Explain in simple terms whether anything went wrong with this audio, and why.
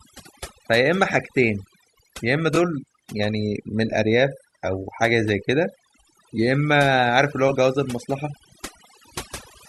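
Overdone noise removal: a noise reducer set far too strong kept cutting frequency bands, leaving a lowered, twinkly background throughout.

Repeated frames: between 2.55 and 2.58 s, what sounds like a single 20 ms chunk played twice, adding a brief stutter and 20 ms of length.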